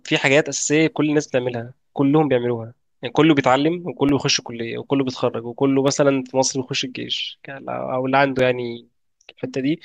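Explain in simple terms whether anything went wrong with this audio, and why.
Five brief dropouts occur at 0.62, 4.09, 5.88, 7.18 and 8.39 s. Each is a block of digital silence, where the playback briefly ran out of sound and output zeros. The gaps last about 1.3 ms, the last about 2.7 ms, heard as sharp ticks in the speech.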